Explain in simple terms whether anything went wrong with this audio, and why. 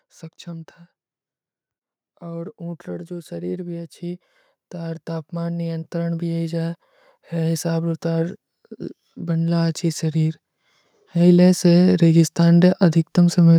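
Automatic gain rising, from 2.2 to 8.4 seconds and again from 11.0 to 13.5 seconds: the recorder judged the speech too quiet and slowly turned itself up, so voice and background swell together.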